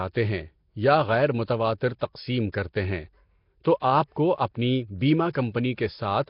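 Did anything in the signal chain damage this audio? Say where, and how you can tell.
Yes, at the codec stage: throughout the speech there is a rough, hissy halo with a smeared, underwater quality and nothing above 5.3 kHz, likely Nellymoser compression at a rate near 22 kbps. Noise-filled empty bands tell it apart from plain low-pass filtering.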